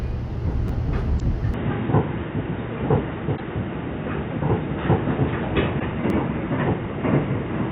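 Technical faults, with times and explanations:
0.68 s and 6.10 s, repeated buffer: at each point a single sliver of about 10.7 ms plays twice in a row, heard as a tiny click or buzz rather than a stutter because the piece is so short. The length fits a 512-sample buffer that was replayed once when fresh audio arrived late, costing roughly 10 ms of sound each time. Unlike stream damage, the repeated material is genuine, clean audio joined hard to itself, with no chirp or garbled texture.
1.17 to 1.22 s, 3.35 to 3.40 s and 5.77 to 5.83 s, damaged data in a compressed stream: three blips of about 50 ms each. Corrupt bytes leave the decoder misreading those frames until it finds the next valid frame header and resynchronises. This differs from the repeated buffer because the burst comes from misread frames instead of a copy of real audio, and it lasts several times longer.
1.54 s to the end, input switched to a poorer device: from this point the sound turns dull and boxy, with nothing above 3.8 kHz and a new noise floor about 55 dB below the signal. 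The level stays about the same and there is no gap at the change. The likely cause is the input moving to a narrower-band microphone or a headset call profile. A gradual filter or codec change would not produce a sudden, lasting step in bandwidth together with a different noise floor like this.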